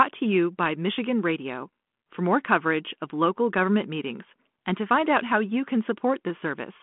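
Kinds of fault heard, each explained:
No kinds of fault are heard in this speech.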